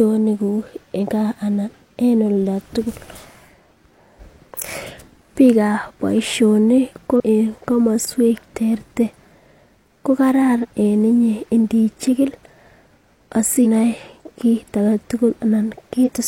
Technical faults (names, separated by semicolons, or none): compressed frames skipped